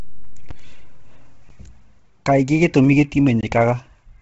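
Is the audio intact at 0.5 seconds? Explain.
No. At 0.51 s the output buffer likely went unfilled for about 5 ms, creating a block of digital silence: the speech drops abruptly to zero and back, heard as a tick or dip. Throughout, including this moment, nothing sounds above 7.8 kHz and the upper range has a breathy, grainy edge, likely from heavy Bluetooth LC3 compression at a low bitrate.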